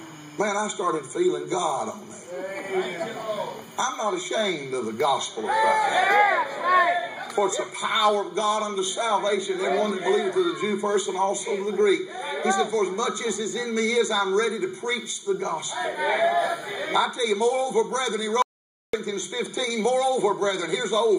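At 18.42 s the audio cuts out to silence and returns at 18.93 s, an audio dropout to silence lasting about 0.51 s with no room tone in the gap. The likely cause is a momentary loss of the input signal while recording continued.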